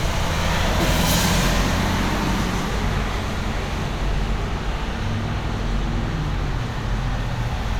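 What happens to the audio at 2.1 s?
Nothing goes wrong at 2.1 s: the audio plays through that moment intact, with no dropout, click, distortion or other fault.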